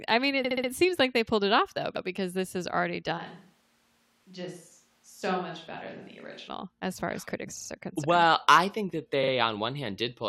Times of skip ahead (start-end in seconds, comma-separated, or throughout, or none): none